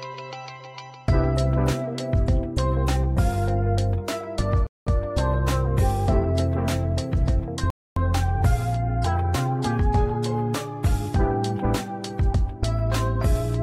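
The sound drops to silence from 4.67 to 4.87 s, about 0.2 s, then resumes, and again from 7.70 to 7.97 s, about 0.26 s. These gaps are likely a Bluetooth stall, where interference delayed packets until the headphones' buffer ran dry.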